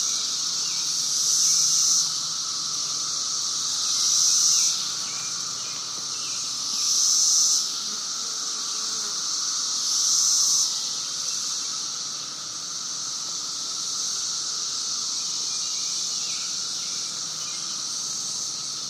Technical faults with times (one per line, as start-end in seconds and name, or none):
none